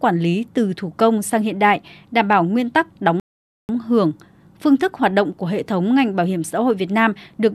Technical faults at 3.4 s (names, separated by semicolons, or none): rebuffering stall